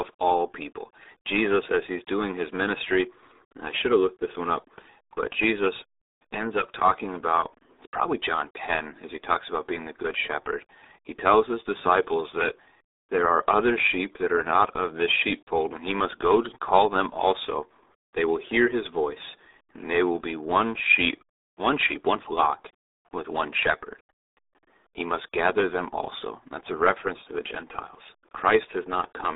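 The whole clip runs through the RealAudio 14.4 codec, the old RealAudio 1 dial-up format, and the heavy damage fits a stream squeezed down to about 8 kbit/s. The speech sits in a narrow 300 Hz to 3.7 kHz band with nothing at all above 3.8 kHz, so it sounds boxy and muffled. The low bitrate leaves a gargly, watery texture on the speech, as if the talker were speaking through a wet phone line.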